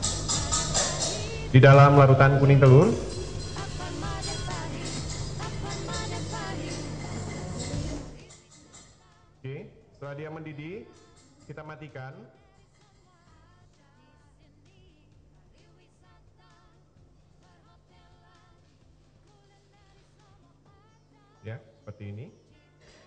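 From 7.91 to 8.42 s, a level drop of roughly 25 dB is applied in unsmoothed jumps, about 150 a second, instead of a continuous ramp. This zipper noise puts a rapid ticking, zipping texture on the sound as it fades.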